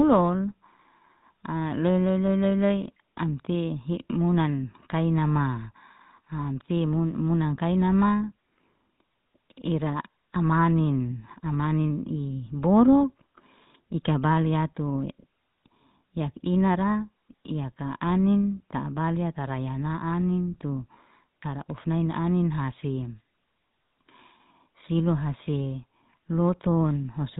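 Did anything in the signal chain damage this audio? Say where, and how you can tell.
Yes. The damage comes from the codec stage: the speech has passed through the GSM full-rate codec, and the artefacts are plainly audible for the whole clip. The voice has a buzzy, gravelly roughness, and nothing is present above 4 kHz. This codec models the vocal tract and excites it with a sparse, regularly spaced pulse train, so fine excitation detail is lost. The result fits the 13 kbps full-rate mode.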